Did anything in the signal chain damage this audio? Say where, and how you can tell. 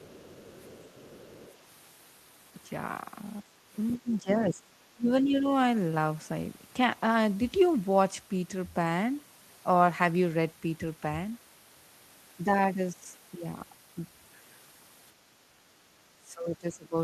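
Yes. The damage sits in call processing. From 0.0 to 1.58 s, a second, fainter voice runs under the speech at about 25 dB down. It returns from 3.75 to 4.13 s, louder, at about 20 dB below. This is likely the other side's voice leaking through. The far end played on a loudspeaker, the microphone picked it up, and the echo canceller failed to subtract all of it before sending.

The talker's own speech also sinks in places. A brief 70 ms dip at 3.42 to 3.49 s drops about 15 dB. From 3.97 to 5.48 s the level falls by up to about 20 dB, overlapping the leaked voice. From 15.76 s to the end it drops as much as about 25 dB. This is likely speech suppressed in double talk. With both sides active, the canceller treated the local voice as echo and attenuated it.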